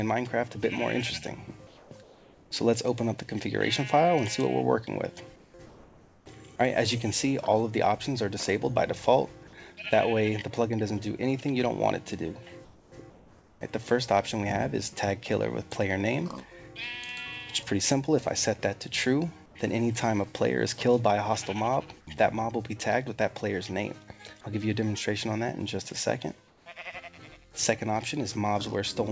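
Eight quiet gaps have their real background swapped for comfort noise in place of the background: 1.67–1.91, 2.03–2.51, 5.36–5.54, 5.66–6.26, 12.65–12.92, 13.10–13.61, 19.46–19.55 and 26.48–26.66 s. They last from 90 to 600 ms. The background there sits about 26 to 35 dB below the loud parts. Each gap turns into a flat, featureless hiss, mostly about 2 to 5 dB quieter, once about 1 dB louder. The likely cause is discontinuous transmission, with the receiver synthesising noise while the sender paused. All of it is band-limited, with nothing above 8 kHz, as a 64 kbps G.722 call path would give.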